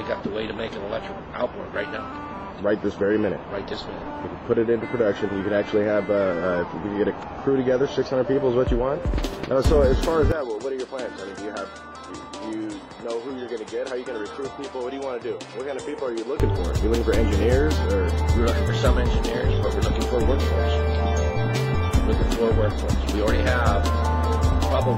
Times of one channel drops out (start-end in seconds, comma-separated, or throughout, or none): none